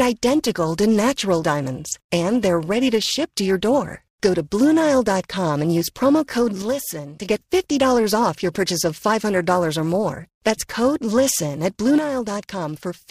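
Periodic clock jitter runs through the whole clip. The converter clock is being shaken at roughly 400 Hz, so each component of the speech carries sidebands about 400 Hz either side. Higher frequencies are hit harder, giving a rough, metallic edge that disappears in the pauses.

From 6.62 to 7.29 s and again from 11.98 s to the end, the level drops abruptly by about 6 dB and then recovers only after the first span. This is likely one channel dropping out, leaving the mono sum at half amplitude.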